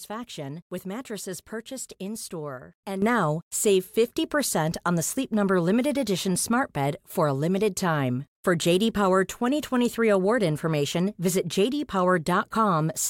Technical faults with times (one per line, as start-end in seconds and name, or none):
3.02-13.09 sudden gain jump